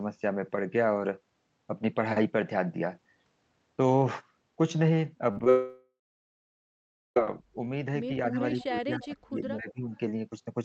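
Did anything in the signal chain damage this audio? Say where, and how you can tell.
Yes. The damage is at the network and call-processing stages, all after 5.3 s.

Burst of packet loss, network stage: from 5.31 to 5.38 s about 50 ms of audio is missing. The receiver covers the hole by extending the last sound for roughly 50 ms and letting it fade, so a held buzz or fading hiss sits where the real signal should be. The sound then picks up further along, with the span in between gone.

Short concealed packet loss, network stage: two brief holes follow immediately, at 5.39 to 5.41 s and 5.44 to 5.47 s, with about 20 ms and 10 ms missing. Each is patched by continuing the preceding sound for under 20 ms before blending back into received audio. You hear a quick smear or wobble rather than a gap, and a short transient inside either window can disappear.

Long network dropout: from 5.50 to 7.17 s roughly 1.7 s of audio never plays. 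Concealment first stretches the last sound into a decaying buzz or hiss, then gives up, leaving about 1.2 s of silence before the signal resumes at a later point, not where it stopped. Extended loss of arriving packets is the likely cause, rather than a local capture fault.

Speech suppressed in double talk, call-processing stage: the level drops three times. The first, at 8.31 to 8.39 s, is shallow, about 5 dB. From 8.67 to 9.39 s it falls by about 35 dB, almost gating the sound out. At 9.60 to 9.90 s it dips by about 15 dB. This pattern likely comes from the echo canceller treating near-end sound as echo while both ends were active and attenuating it.

Echo leak, call-processing stage: at 9.95 to 9.99 s there is a faint delayed copy of earlier sound, lagging by 270 ms and sitting about 40 dB below the main signal. It is a brief scrap, not a sustained echo. The likely cause is the far end's echo canceller not fully removing its loudspeaker pickup. 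The Opus path's roughly 8 kHz bandwidth limit is expected and is not part of the fault.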